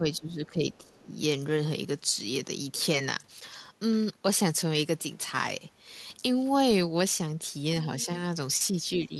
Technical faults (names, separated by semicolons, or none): speech suppressed in double talk; other side's voice leaking through